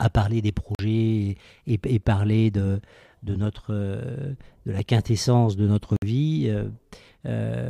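Bluetooth stalls at 0.75 s and 5.96 s, right after "parler des" and after "la quintessence de notre" before "vie euh", cut the speech to silence for 42 ms and 58 ms. Each gap is likely interference delaying packets until the headphone buffer ran dry.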